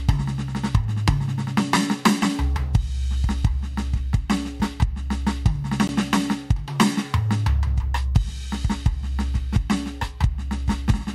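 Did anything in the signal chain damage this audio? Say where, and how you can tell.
Yes, a block of digital silence at 5.88 s: the music drops to silence for 15 ms with no fade. That points to the driver or buffer stage.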